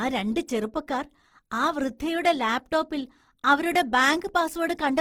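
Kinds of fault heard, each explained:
Opus compression: throughout the clip, the speech has a noisy, rough, grainy texture. This is likely Opus running in its music (CELT) mode. At a rate that fits about 16 kbps, the encoder keeps each band's energy but lacks bits for detail, so it fills bands with folded copies of lower bands or with noise. The damage is plainly audible, yet the bandwidth stays full, with content reaching about 20.4 kHz.
Hard clipping: from 3.50 to 3.54 s, just after "ചെറുപ്പക്കാർ ആ വൃദ്ധയുടെ ലാപ്ടോപ്പിൽ", the peaks exceed what the signal path can carry by about 1 dB and are cut flat. Because the overload is small and lasts only around 33 ms, it shows as a brief crackle rather than sustained fuzz. The flattened tops add harmonics high in the spectrum that were not in the original sound.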